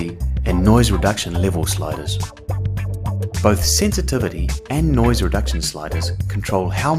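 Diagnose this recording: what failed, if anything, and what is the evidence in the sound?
Nothing failed: the sound carries no evidence of a fault at any stage of the chain.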